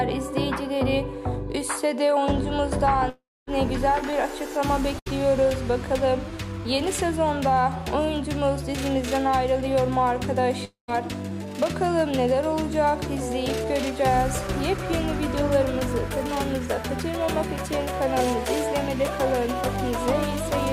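From 3.09 to 3.49 s, and again from 10.65 to 10.90 s, a long network dropout is the likely cause: a fading buzz gives way to silence, seen as a smeared band and then a blank gap of about 250 ms and 130 ms. Between 4.11 and 5.23 s, repeated packet loss leaves four short holes, the longest 70 ms, patched with copied sound. It sounds choppy, with brief repeated stripes visible on the spectrogram.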